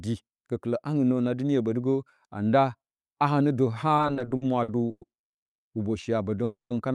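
Repeated stalls (stutter) run from 3.97 s to 5.03 s. Packets reached the receiver late or more slowly than playback consumed them, so the jitter buffer emptied ten separate times. Each gap was bridged by stretching the last sound, with the longest wait about 110 ms and roughly 280 ms filled in all, about a quarter of that stretch. Nothing drops out, but the speech drags and catches in uneven jolts.

A call audio freeze follows at 5.51 s to 5.69 s. The speech halts for about 160 ms, going silent, then resumes where it stopped with nothing missing. The likely cause is packets held up in transit, which drained the jitter buffer and added that delay.

A second call audio freeze comes at 6.44 s to 6.72 s. Here about 260 ms is inserted: the last sound carries on briefly as a fading buzz or hiss, then about 150 ms of silence. The speech continues intact, with no content lost. This pause likely comes from a longer packet delay emptying the buffer again. 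Throughout, the Opus call path limits the audio to about 12 kHz.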